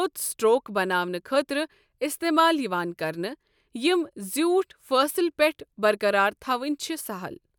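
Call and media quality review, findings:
Nothing stood out on listening to the speech in this recording.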